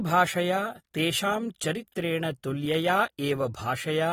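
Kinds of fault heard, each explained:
AAC compression: the speech carries plainly audible coding damage and has no content above 19.4 kHz, which is likely lossy AAC-LC coding at a rate that fits around 48 kbps. The encoder splits the signal into blocks of frequency lines and spends its few bits where hearing is most sensitive, quantising the rest coarsely. On a spectrogram, energy stops at a flat ceiling near 19.4 kHz, while the waveform looks ordinary.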